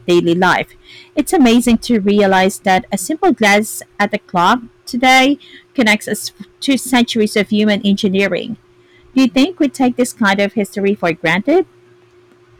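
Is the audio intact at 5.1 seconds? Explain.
No, hard clipping runs throughout, including 5.1 s: speech driven about 12 dB past full scale has a few percent of peaks sliced flat, giving harsh fuzz, unlike soft saturation's rounded warmth.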